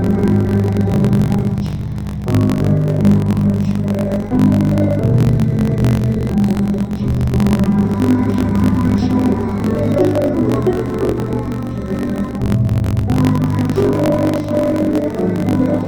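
From start to finish the audio sounds an octave low and oddly doubled, with a choppy, grainy texture and a flutter near 47 Hz, yet the overall pace is normal. This is interleaved audio read as planar: each block of alternating left and right samples was split in half, so each channel plays stretched to half speed. The flutter comes from blocks repeating every 21.33 ms, which fits a 1024-sample block.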